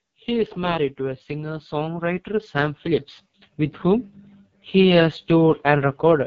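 Right from the start the speech has the rough, raspy texture of the AMR wideband (HD Voice) codec, which points to its lowest rate, with nothing above 7.4 kHz. From 0.05 to 4.14 s there's automatic gain rising, as the level control slowly swells voice and background together by about 7 dB, then again from 4.71 to 6.22 s by about 3 dB.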